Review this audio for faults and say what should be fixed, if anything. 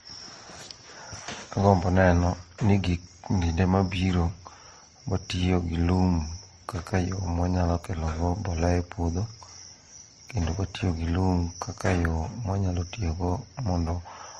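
Throughout, the speech carries mixed swirly coding artefacts and nothing above 15.5 kHz, likely from transcoding between lossy codecs, such as MP3, then Opus, then MP3. To prevent it, re-export from the original lossless source and encode only once, at an adequate bitrate.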